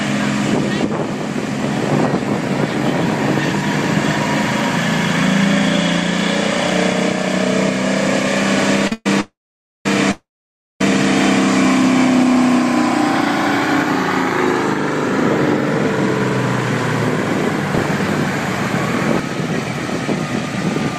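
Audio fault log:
8.87 s to 8.92 s, short stall from a late packet: the last sound is held for 41 ms, then continues from the same spot with nothing lost, too brief to fall silent.
8.92 s to 9.06 s, 9.20 s to 9.86 s and 10.11 s to 10.81 s, call audio freeze: the sound is stretched into a fading tail for 129, 648 and 692 ms, of which about 10, 520 and 570 ms are silent. It then resumes where it stopped with nothing skipped, likely because delayed packets left the jitter buffer empty.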